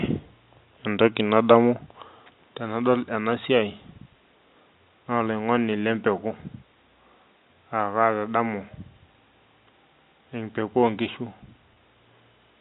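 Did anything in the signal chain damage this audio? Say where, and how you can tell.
Yes. At 11.74 to 11.76 s, near the end, the speech briefly holds and turns slightly buzzy for about 20 ms, as if one pitch cycle were looped before the sound carries on. This is packet loss with pitch repetition at the network stage. A single packet went missing, and the receiver filled the gap by repeating the last pitch period. The gap was short enough that the repeat never faded to silence. The G.711 telephone coding keeps the audio below 4 kHz.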